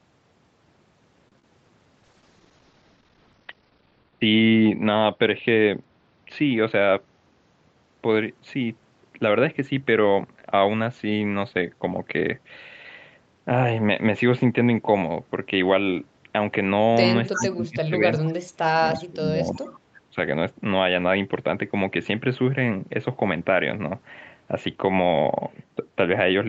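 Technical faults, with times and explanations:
1.28–1.33 s, short stall from a late packet: the sound is held a beat too long, with a faint buzzy sustain before it picks up again. A packet arrived late, the jitter buffer ran dry, and the receiver stretched the last bit of audio for 33 ms until it came. Playback then resumed from the same point, so nothing is lost, but the delay grew by 33 ms.
1.40–1.44 s, short concealed packet loss (two in a row): a quick smear or wobble, as if the sound briefly slips out of focus. Two adjacent gaps of 10 ms each never reached the decoder. The receiver bridged them by extending the preceding sound, 15 ms and then 8 ms of synthetic fill, and blended back into the real audio. Any detail in those moments is gone rather than merely delayed.
2.05–5.99 s, call bitrate drop: the speech turns rough and watery, and duller at the top, for about four seconds. The encoder's budget fell from 32 to 11 kbps and stayed at the lowest rate for 1.88 s. 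With so few bits, Opus codes the signal more coarsely and narrows its bandwidth from 8 kHz to 6 kHz, which removes the upper sibilance until the rate recovers.
6.72–7.06 s, jitter buffer speed-up: the speech briefly sounds hurried, running at 114% speed while the pitch stays put. Too much audio had built up in the buffer, so the receiver trimmed it back by cutting out tiny pitch-period slices, one after another. In total only about a twentieth of a second was removed, but the rush is audible because the pitch does not shift to explain it.
17.32–17.46 s, 18.18–18.33 s, 19.55–19.64 s, echo leak: scraps of the speech come back 0.34 s late. The first is fairly plain at about 10 dB under the speech, and the later two are faint, near about 30 and 25 dB down. The likely cause is a far end on a loudspeaker whose echo canceller let part of the playback through its microphone and sent it back.
17.35–19.72 s and 20.03–20.16 s, speech suppressed in double talk: the speech sinks. 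The deepest dip is around 30 dB, with roughly two seconds affected in the longer stretch, and the short second dip goes down about 25 dB. This likely happened because both sides spoke at once, and the echo canceller, unable to separate talker from echo, pushed everything down.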